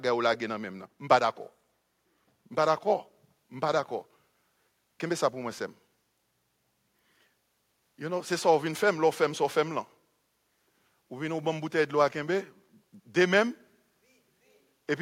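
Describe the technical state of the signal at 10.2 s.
At 10.2 s the speech signal is intact, with no audible fault at that moment.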